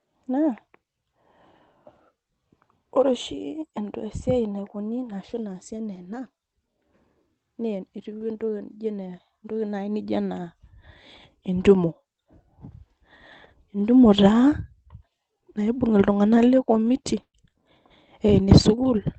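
At 8.17 s a short stall from a late packet begins. The jitter buffer ran dry, and the receiver held the current sound for about 32 ms until the packet turned up, lasting to 8.24 s. Nothing is lost, but the sound stretches with a faint buzzy sustain, and everything afterwards plays about 32 ms later than before.

Overlapping that stall, from 8.21 s, is the first lost packet rebuilt from error correction. Each rebuild covers 60 ms. The same repair recurs at 8.70 s, 16.38 s, 16.86 s, 17.04 s and 17.45 s. In each case the following packet carried a coarse low-rate copy of the missing one, and the decoder played that copy instead of leaving a gap. The result is a brief patch that sounds grainier and noisier than its surroundings. Because the call path already limits the audio to about 8 kHz, there is no additional high-frequency dip in these patches.

From 17.22 s to 17.36 s comes a burst of packet loss, removing about 120 ms of audio. 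The receiver extended the last sound for roughly 114 ms, letting it decay into about 70 ms of silence. This is heard as a held buzz or hiss that fades out. Playback then resumes further along, with the middle portion missing.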